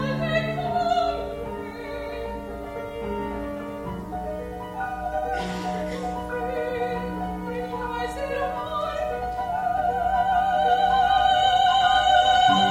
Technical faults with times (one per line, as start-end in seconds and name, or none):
none